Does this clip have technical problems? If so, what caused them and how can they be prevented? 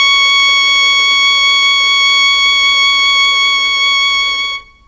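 Yes. Throughout the music, a resampler restarted on every block converts each 50 ms block from 48 kHz to 16 kHz separately, leaving 20 Hz ticks that show as evenly spaced vertical spectrogram lines. Prevent this by running one continuous resampler that carries its filter state across block boundaries.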